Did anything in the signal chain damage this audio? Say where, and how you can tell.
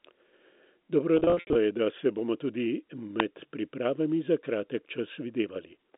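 Yes. In the network stage there's packet loss with pitch repetition from 1.17 to 1.55 s, just before "je da se bomo". About 230 ms goes missing in runs up to 70 ms. The receiver papers over each gap with repeated pitch periods, so it sounds buzzy and held.

In the analogue wiring there's an electrical switching spike at 3.20 s, between "da se bomo tudi" and "pripravami za". It's a sharp snap sitting on top of the sound, likely a nearby switch arcing into the line.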